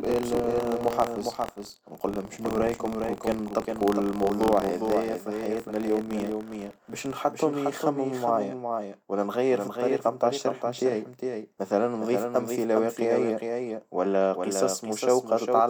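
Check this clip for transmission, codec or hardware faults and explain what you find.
Two faults are present in this speech clip.

Doubled audio track, throughout: a full-band second copy of the speech trails the original by around 400 ms, about 5 dB quieter, with no decay or room colour. This is likely a second, slower capture path or an edit holding two offset copies, and it is heard as a dry, distinct echo on every phrase.

Buffer tearing, from 0.0 to 7.17 s: the writing program and the reading hardware have slipped so that they cross within each period. A small slice of every buffer replays audio roughly 50 ms old, with hard joins. This gives a robotic buzz at 43.1 Hz, consistent with a 1024-sample buffer, and the buzz is present only while speech is sounding.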